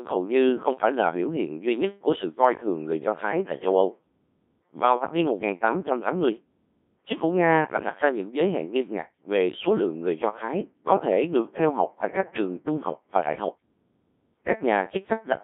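From start to finish, the speech has passed through a Codec 2 vocoder at a very low rate, which fits roughly 1.3 kbit/s. Only pitch, voicing, energy and a coarse spectral envelope survived; the decoder then rebuilt the sound from sine waves, so the original waveform is gone. The result is heavily damaged, robotic and buzzy, confined to a narrow band of about 200 Hz to 3.6 kHz.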